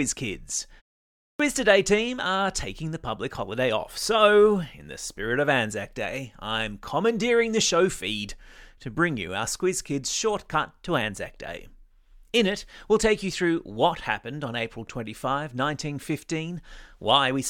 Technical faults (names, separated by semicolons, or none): clipped start after a pause